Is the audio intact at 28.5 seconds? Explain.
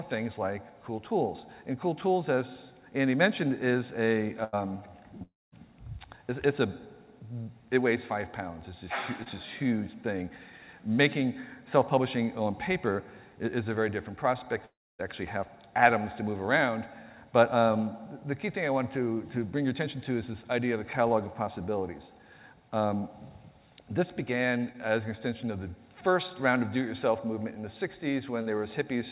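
No. Just before that point, from 28.42 to 28.48 s, there is a short concealed packet loss. About 40 ms of audio never reached the decoder in time. The receiver covered the gap by extending the preceding sound, following its pitch if it was tonal or filling with shaped noise if not, then faded back into the real signal. It is heard as a brief smear or wobble, and any very short sound there may be lost.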